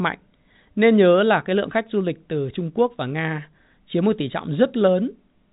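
There are no technical faults to describe in this speech clip, which is carried over G.711 telephone coding with nothing above 3.8 kHz.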